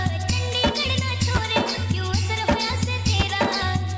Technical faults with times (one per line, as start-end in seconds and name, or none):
0.00-3.97 resampler restarted on every block